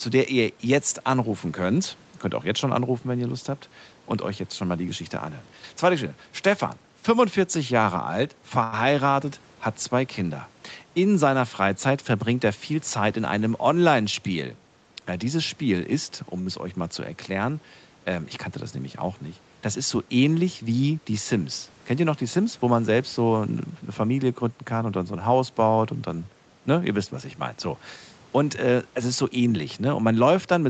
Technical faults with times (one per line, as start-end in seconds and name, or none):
8.63-8.74 short stall from a late packet
12.55-13.33 jitter buffer speed-up
16.41-16.48 short stall from a late packet
22.38-22.68 jitter buffer speed-up